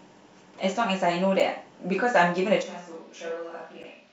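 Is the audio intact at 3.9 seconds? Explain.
No. From 2.64 s to the end, the sound switches to what is likely a distant microphone: it turns roomy and hollow, loses bass, drops about 10 dB, and room noise sits only about 25 dB below the speech. Close to that, from 3.82 to 3.85 s, there's damaged data in the compressed stream. The decoder misreads the corrupted frames, loses sync and hunts for the next header, so you hear a short glitch.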